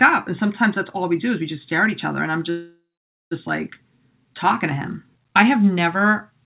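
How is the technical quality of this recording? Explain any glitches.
The recording has one glitch, heard through a narrowband call path where nothing reaches above 4 kHz, consistent with G.711 mu-law. From 2.50 to 3.33 s, just after "each other and I'm", a call audio freeze interrupts the speech. Packets were likely delayed and the jitter buffer ran dry, so the receiver extended the last sound as a fading buzz or hiss, followed by about 490 ms of silence. The speech then resumes intact at "like talking to him", with nothing lost but 0.81 s of extra delay inserted.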